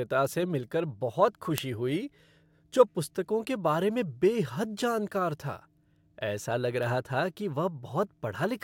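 A receiving device running on its own clock, roughly 30 ppm away from the sender's, leaves this speech clip with word clock ticks: sharp ticks every 0.7 s or so, about ten in all, from 0.83 s, just after "से मिल कर", to 8.33 s, each where a single sample slips.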